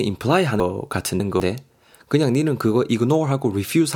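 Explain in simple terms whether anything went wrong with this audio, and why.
Chunks out of order, 0.6 to 1.4 s: one 200 ms piece of speech plays three pieces late, jumbling that moment.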